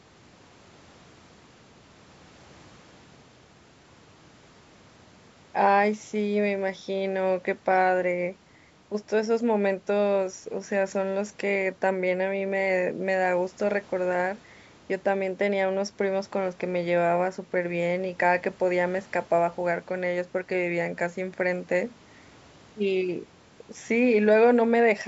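No faults are present in the speech, which shows the normal call microphone chain with the lowest bass trimmed by its high-pass filter.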